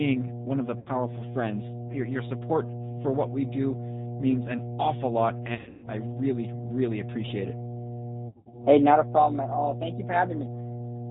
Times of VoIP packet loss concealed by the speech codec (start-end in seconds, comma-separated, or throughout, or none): 0.80-0.92, 5.55-5.89, 8.28-8.64